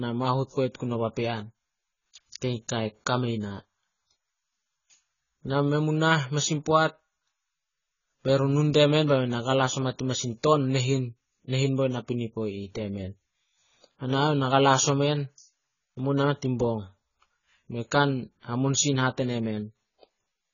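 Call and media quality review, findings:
Dull, band-limited speech for the whole clip, nothing above about 7 kHz, with a warbly, fizzy smear on sibilants. Likely AAC compression, AAC-LC starved for bits, which fits something around 16 kbps: cut-off pulled down, high bands left patchy or noise-filled.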